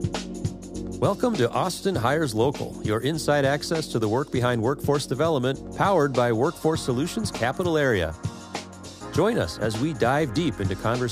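No technical fault can be heard anywhere in the audio, and the signal stays steady and intact throughout.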